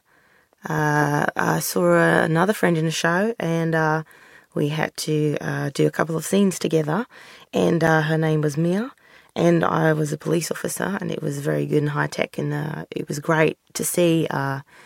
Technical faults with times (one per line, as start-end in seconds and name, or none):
7.87 block of digital silence